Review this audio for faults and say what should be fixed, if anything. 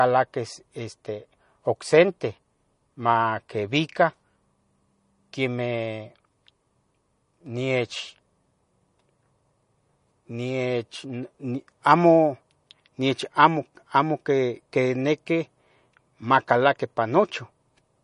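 The whole recording, start to finish, has what sounds like MP3 compression, and the damage is plainly audible. Nothing comes through above 10.5 kHz, so the top end is sliced off flat, and the speech has that watery, swirly texture from weak frequency detail dropping in and out between frames. Sibilants get a metallic edge and consonant attacks smear. The treble cut and the artefacts fit a low bitrate of around 40 kbps. To avoid this, export or stream the speech at a higher bitrate, or keep a lossless master and encode only once at the final stage.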